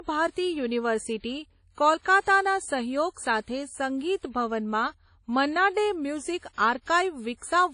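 From start to finish the speech carries plainly audible transform-codec damage, likely from WMA compression. Nothing is present above 10.1 kHz. Weak spectral detail has been zeroed, which fits a low bitrate near 32 kbps, leaving a ringing, washy texture and hiss that swells and fades with the voice.

From 2.02 to 2.05 s, just before "સહયોગ સાથે", there is pre-echo. A sharp onset sat late in a codec block, so quantisation noise sized for it spread about 34 ms backward into the quiet gap. A brief hiss arrives ahead of the attack, which sounds softened and smeared.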